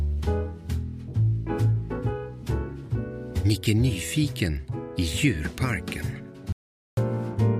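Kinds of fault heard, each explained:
Audio dropout to silence: near the end, at 6.52 s, the sound cuts off abruptly and the track falls to silence, with no room tone or background underneath, until it resumes mid-flow at 6.97 s. About 0.45 s of material is simply missing. The likely cause is a brief loss of the input signal, such as a disconnect, link failure or accidental mute, while the recorder kept writing silence.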